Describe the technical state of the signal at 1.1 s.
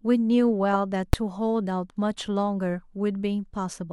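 At 1.13 s the speech is interrupted by invalid numbers at full scale: a calculation yielded infinite or invalid values, and those samples were pinned at the maximum output level for a block of about 5 ms. At that length the start and end edges merge, so it is heard as one sharp bang rather than two pops with silence between. Unlike clipping, it does not follow the speech waveform; the output simply jumps to the rail regardless of what was being said.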